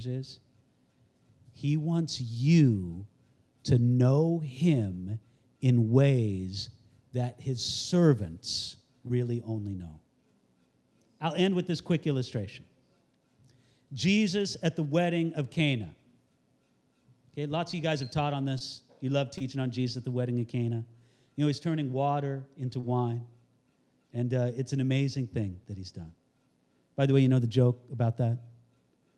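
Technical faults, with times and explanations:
9.07, 17.71, 18.59, 19.38 and 22.80 s: short concealed packet loss. Each time about 20 ms of the call arrived too late, so the decoder carried the previous sound forward to bridge the gap, leaving a quick smear or wobble, e.g. right before "only know" and after "he's turning water into".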